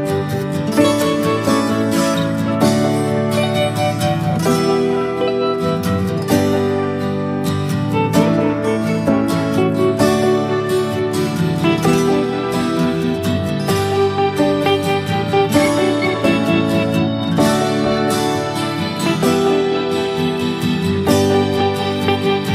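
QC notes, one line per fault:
No fault found for the QC notes.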